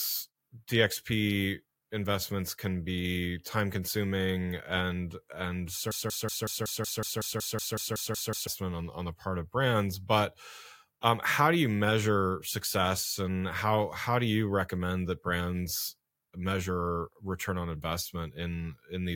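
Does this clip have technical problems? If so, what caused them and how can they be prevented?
Yes. After "time consuming and and", a broken-record loop repeats one 186 ms fragment exactly 14 times from 5.91 to 8.47 s. It is likely a stalled stream resending its last buffer, so the audio due then is lost. The waveform and spectrogram show identical blocks every 0.19 s until "on on the part". Deeper buffering, plus stall handling that mutes instead of repeating, prevents it.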